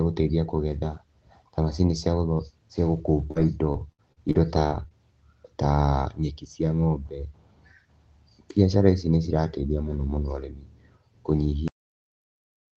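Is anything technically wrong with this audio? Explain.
Yes. There are two faults.

From 3.31 to 4.93 s there is repeated packet loss, heard as robotic sound. Audio packets went missing about eight times in quick succession. Each hole was filled by stretching the last sound, and the next hole came soon after. About 240 ms was missing in total, with the longest gap 61 ms. Concealment covers about 16% of that stretch. The result is choppy, with pieces missing.

At 11.68 s the clip has a cut-off end. The final buffers were never written. The sound stops mid-stream and drops straight to digital silence, with no natural decay. The call path, which sounds consistent with a low-bitrate Opus link limited to 8 kHz, carries the audio right up to that abrupt stop.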